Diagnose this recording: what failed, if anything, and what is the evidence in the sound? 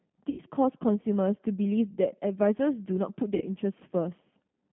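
The codec stage is at fault: G.729 coding runs through the whole speech clip. The band is held between about 150 Hz and 3.5 kHz, and the sound is rough and slightly synthetic. A spectrogram shows a hard ceiling near 3.5 kHz with blotchy, frame-quantised harmonics, which fits an 8 kbit/s CELP coder.

The network stage also failed, showing up as VoIP packet loss concealed by the speech codec. Gaps of about 80 ms at 0.30 to 0.39 s and about 60 ms at 3.35 to 3.46 s turn into a fading extension of the preceding sound. The decoder repeats its last pitch and filter at falling gain. The waveform shows a smooth decaying envelope where the speech should be, and the spectrogram shows smeared, static harmonics.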